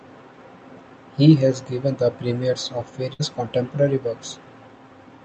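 At 3.13 to 3.22 s, just after "given the premieres of", a burst of packet loss occurs. The receiver stretches the last sound for about 60 ms, fading it, and the speech then resumes about 60 ms further on. This is concealment, not a silent dropout.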